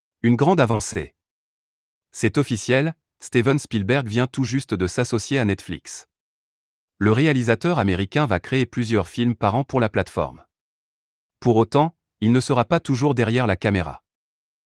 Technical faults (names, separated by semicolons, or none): repeated packet loss (robotic sound)